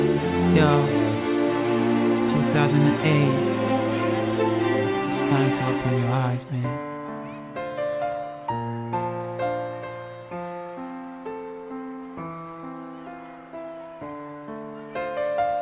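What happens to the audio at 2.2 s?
Nothing goes wrong at 2.2 s; the audio runs through that moment intact, with no dropout, click or other disturbance.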